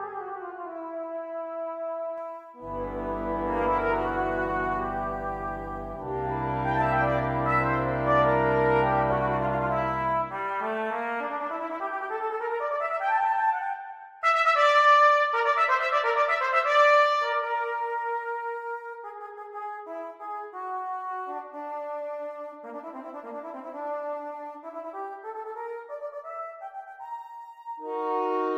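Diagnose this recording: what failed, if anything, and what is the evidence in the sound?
A de-emphasis filter applied wrongly in the playback chain dulls the opening, from 0.00 to 2.18 s. The top end slopes away smoothly, about 13 dB down at 10 kHz relative to 1 kHz, because a treble cut meant to reverse pre-emphasis hit audio that had none, or was applied twice.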